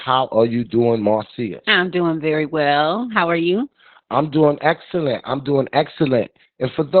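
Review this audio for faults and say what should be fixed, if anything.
The speech is muffled, hoarse and slightly robotic from start to finish, with the band closed off near 4 kHz. This is heavy Opus voice compression. The codec ran its SILK linear-prediction coder in narrowband mode, which fits a bitrate around 8 kbps, so it kept only the lower band and coded the excitation coarsely in 20 ms frames. To prevent it, encode at a higher Opus bitrate so the codec keeps wideband or fullband audio.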